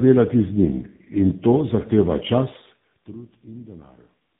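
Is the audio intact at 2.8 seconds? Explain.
No. At 2.8 seconds the speech carries tandem speech coding, present across the whole clip. It sounds like three speech codecs in a row, each re-encoding the previous one's degraded output. The result is rough, muffled and warbly, with nothing above about 3.7 kHz.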